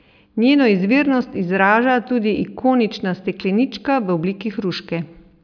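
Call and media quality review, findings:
No audible faults found in this speech recording.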